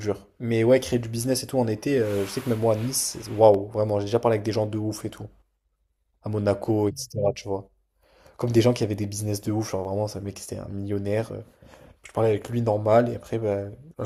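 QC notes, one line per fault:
0.40–13.01 s, clock drift buffer slips: A click recurs about every 1.58 s, around ten times through the speech. Each is likely a tiny block of samples dropped or repeated as two mismatched clocks drift apart, about 100 ppm, a few samples per slip.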